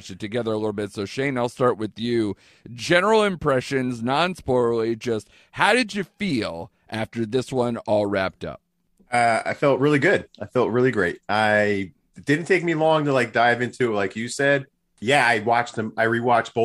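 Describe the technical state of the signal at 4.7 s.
At 4.7 s the speech signal is intact, with no audible fault at that moment.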